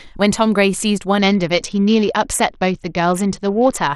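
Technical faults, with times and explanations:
1.19 to 3.87 s, Bluetooth SBC bit pool drop: the speech suddenly loses its brightness and takes on a gritty, rough texture that persists until the rate recovers at 3.87 s. The link appears to have been squeezed, so the encoder cut the bits per frame sharply. That fits a fall from a bit pool of about 28 to about 8, near 72 kbps. The highest sub-bands get almost nothing, so treble dulls. The remaining bands are coarsely quantised, which produces the grainy noise.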